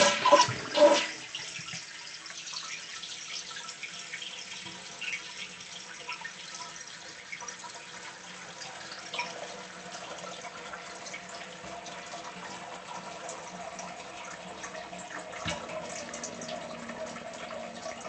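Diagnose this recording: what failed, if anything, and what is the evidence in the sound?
Nothing failed in this recording of sounds. It passed through a WebRTC call path, and the content above about 8 kHz is missing, as expected from the Opus codec's bandwidth setting on that path.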